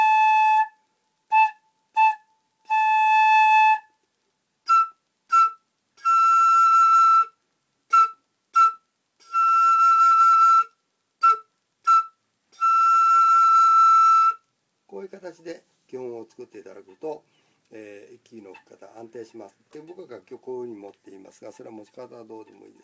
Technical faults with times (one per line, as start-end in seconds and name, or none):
0.00-22.83 aliasing